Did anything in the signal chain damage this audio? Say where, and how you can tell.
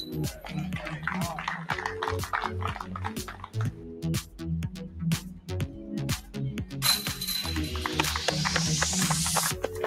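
Yes. A noise suppressor was applied to music or sounds throughout, at the call-processing stage. A speech-tuned suppressor treats sustained tones, ambience and tails as noise, so held sound keeps sinking and recovering with a gain swing of around 10 dB, heard as pumping and thinning.

Sound cut by the noise suppressor at 0.35–0.51 s (about 7 dB), 3.19–4.04 s (about 11 dB), 4.22–4.37 s (about 10 dB), 4.70–5.00 s (about 9 dB), 5.22–5.50 s (about 11 dB) and 5.68–5.91 s (about 6 dB). In each, steady or decaying material ducks while sharper onsets pass.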